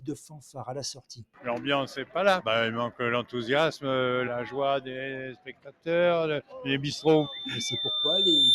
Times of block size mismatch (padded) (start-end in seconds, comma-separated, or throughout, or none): none